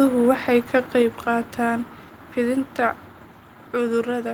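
At 1.02 s, between "waxay ka" and "qaataan fidinta", the speech and background drop together by about 4 dB in one instant step, likely a microphone volume step-down by call software. Unlike compressor pumping or a fade, the level never recovers.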